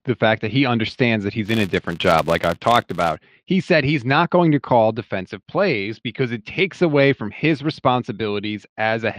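Right after "that he understands that", from 1.46 to 3.17 s, a filter restarted on every block puts a 188 Hz buzz over the speech, which fits 256-sample blocks.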